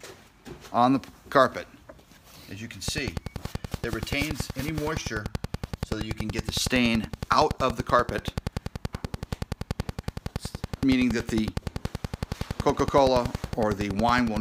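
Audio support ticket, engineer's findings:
Train of clicks from 2.88 s to 14.38 s, running to the end. Regular ticking at 10.6 clicks per second, about 150 in total, peaks around 15 dB above the signal and audible through pauses. Likely cause: interference from nearby equipment or a faulty connection or power supply injecting a periodic pulse.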